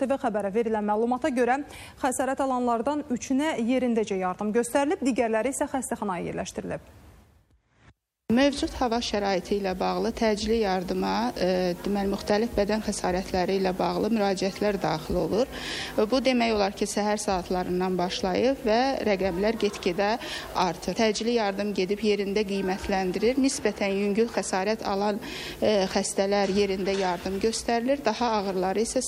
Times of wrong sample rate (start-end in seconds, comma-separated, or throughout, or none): none